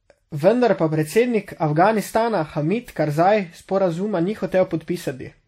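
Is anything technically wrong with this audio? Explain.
Yes. Throughout the speech, transcoding between lossy codecs is audible: smeared, swirly artefacts from two encoders stacked together, likely an earlier WMA-style encode re-encoded to low-bitrate MP3. A spectrogram shows everything stopping at about 15.9 kHz.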